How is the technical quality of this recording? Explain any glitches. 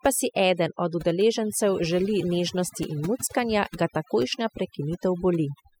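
Overdone noise removal, present throughout the speech, limits the quality. A noise reducer set too hard keeps cutting frequency bands near the noise floor, leaving twinkling specks in near-silent gaps.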